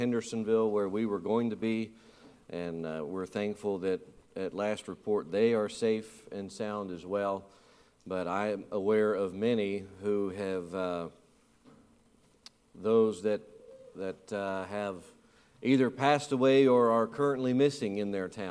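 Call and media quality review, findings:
No audible faults found.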